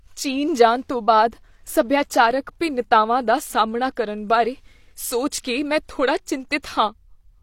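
A speech clip with one pre-echo fault. At 6.62 s, just after "ਮੈਂ ਥੋੜ੍ਹਾ", a short hiss smears about 17 ms ahead of a sharp attack. The transform codec spread quantisation noise across its block.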